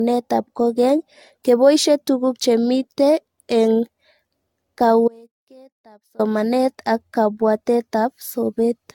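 From the start and through the whole speech clip there is generation loss: the voice sounds swirly, hollow and smeared, consonant attacks are blurred, and nothing remains above 17 kHz. The likely cause is repeated lossy re-encoding, pointing to AAC at around 96 kbit/s passed through roughly seven times. A single encode at that rate would sound much cleaner. Here each pass re-quantises on a shifted frame grid, so noise and spectral holes pile up.

At 5.08 s the speech cuts off abruptly. It returns at 6.19 s, leaving a gap of about 1.11 s. This is an audio dropout to a faint residue. The gap is not true silence: a faint trace of the signal continues, about 30 dB below its normal level. That rules out a natural pause or a fade, since the edges are sudden and mid-flow. The likely cause is the signal feed breaking while the downstream path stayed live.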